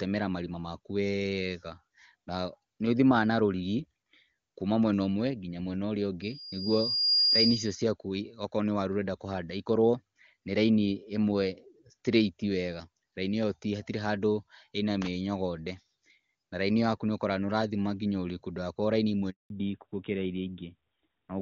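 At 6.22 s a loudspeaker feedback squeal kicks in. A thin tone at about 4.8 kHz swells over roughly a second until it sits around 5 dB above the speech, then hangs there until 7.89 s. That's the mic hearing the speaker it feeds: at that one frequency the loop gain tipped past unity, so the tone kept feeding itself instead of dying out.

Right after "ndũgakorwo raini imwe", at 19.30 s, the audio cuts out completely for 200 ms, through 19.50 s. That's a handover gap. The phone was moving the call onto a different network link, and nothing came through while it switched over, so the sound just drops to silence until the new path picks up. Whatever was said in that fifth of a second is gone for good.

When the sound returns at 19.50 s, it has fallen back to narrowband and stays that way to the end. Everything above 4 kHz is missing, so it comes across duller and a bit rougher than before, when the AMR-WB wideband codec was handling it cleanly at a rate that fits 23.85 kbit/s. 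The new band limit and character point to the call dropping to AMR narrowband, something like the 12.2 kbit/s mode.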